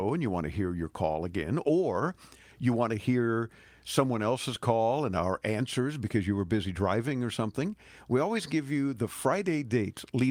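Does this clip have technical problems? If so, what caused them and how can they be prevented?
No, there are no technical problems to point to in this clip. Nothing in the recording calls for a cause or a preventive step.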